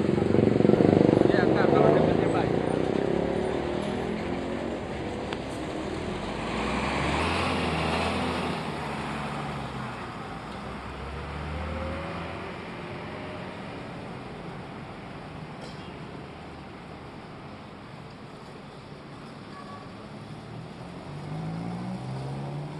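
A section at the wrong speed runs from 7.19 s to the end at 22.80 s. It plays 1.12 times too fast, so the sound turns high and hurried, with pitch up about two semitones, likely because it was fitted to the wrong clock.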